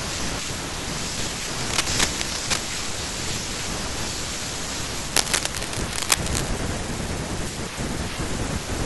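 Cable scratch noise runs from 1.61 to 2.59 s and from 5.16 to 6.50 s. Dense, uneven scratching sits about as loud as the speech, likely from a worn, moving connector.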